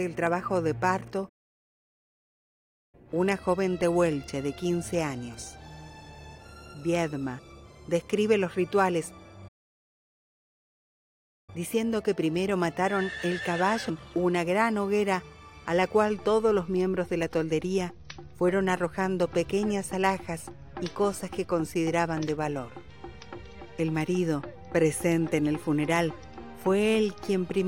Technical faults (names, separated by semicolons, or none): playback stall